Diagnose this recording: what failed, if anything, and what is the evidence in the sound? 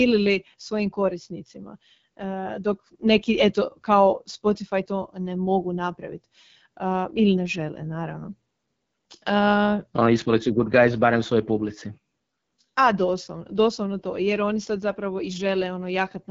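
The codec stage failed: the speech went through the AMR wideband (HD Voice) codec at one of its lowest rates, which fits 8.85 kbit/s. Throughout, the pulse-driven vocal tract model leaves the voice rough and raspy, and nothing remains above 7.6 kHz.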